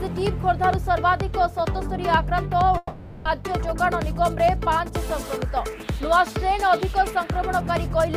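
The audio has a long network dropout from 2.77 s to 3.28 s. At 2.77 s the sound stops being carried forward normally and turns into a synthetic continuation of the last fragment, a buzzy tail that decays over about 480 ms, with a brief silence of about 20 ms before the signal resumes at 3.28 s. Roughly half a second of material is missing, and the return picks up later in the audio. The likely cause is a run of lost packets concealed by the receiver.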